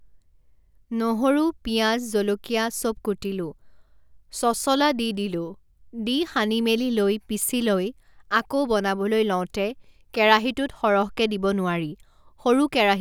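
From 10.87 to 11.87 s there is channel delay (comb filtering): one channel lags the other by roughly a single sample, about 0.02 ms, before the mono sum. The first cancellation notch lands near 20 kHz, so the speech loses a little top-end air and sounds slightly dull.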